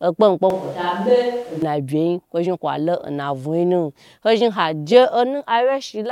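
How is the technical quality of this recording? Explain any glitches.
One clear glitch stands out in this speech recording. From 0.50 to 1.62 s the voice abruptly turns roomy and hollow, losing its low end and dropping by roughly 5 dB, while background noise rises to sit only about 25 dB below the speech. The snap back at 1.62 s is just as sudden. This is likely a switch to a distant microphone: the close mic's signal dropped out, so a mic farther away, hearing more room and less voice, briefly carried the recording.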